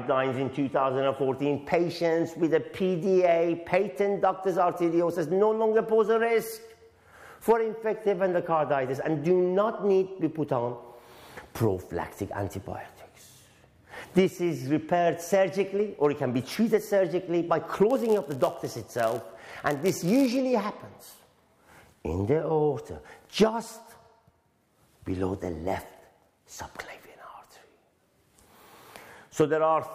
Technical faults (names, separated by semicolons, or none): block size mismatch (padded)